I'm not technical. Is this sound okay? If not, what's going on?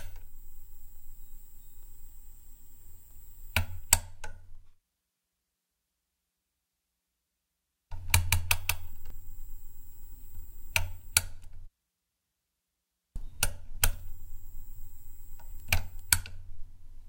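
No. From about 8.08 to 9.10 seconds there is a doubled audio track. The likely cause is the same sound being picked up twice, once through a slower route, so two copies got mixed together. You hear everything twice: a second, somewhat quieter copy trails about a fifth of a second behind the first, like a flat, too-clean echo with no room sound. It switches on and off abruptly at those two moments.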